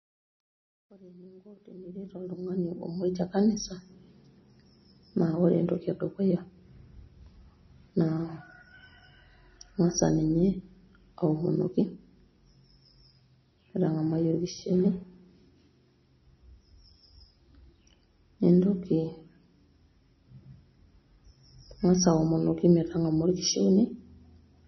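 From 0.0 to 3.23 s, the fade shows truncation distortion. The fade was computed with about 11 bits and no dither, so the quietest part, worst from 0.0 to 1.68 s, turns gritty. Unlike steady dither hiss, this grit follows the signal and thins out as the level rises.

Throughout the clip, heavy watery, swirling artefacts and a hard ceiling with nothing above 5.9 kHz point to the likely cause being MP3 compression at a low bitrate, around 24 kbps. A simple low-pass filter would dull the sound without this shifting, bubbling texture, which comes from weak frequency lines switching on and off.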